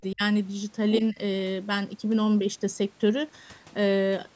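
Speech suppressed in double talk hits from 0.12 to 0.21 s, where the speech drops sharply, by roughly 35 dB at its deepest, and nearly vanishes for about a tenth of a second. The likely cause is an echo canceller that could not tell its own talker from loudspeaker echo while both sides spoke, so it turned everything down.

The other side's voice leaking through follows from 0.93 to 1.01 s. A brief scrap of a second voice sits roughly 10 dB under the main speech, likely left over from the far end playing on the loudspeaker and getting back into the microphone.

The speech is suppressed again from 1.01 to 1.18 s, a shallower dip of around 10 dB lasting about 70 ms, likely as the talk overlaps once more.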